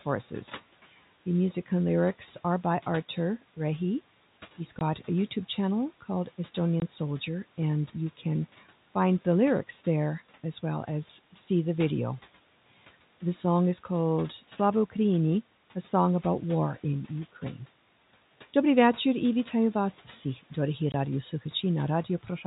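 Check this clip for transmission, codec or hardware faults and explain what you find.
One transmission fault is present: packet loss filled with silence, at 4.79–4.81 s, 6.80–6.82 s and 20.92–20.94 s. Each 20 ms gap, which fits two lost 10 ms packets, becomes silence with hard edges, a flat waveform line and a blank vertical strip on a spectrogram. The room noise, about 23 dB below the speech, drops out inside each gap, and the G.711 telephone band stops at 4 kHz.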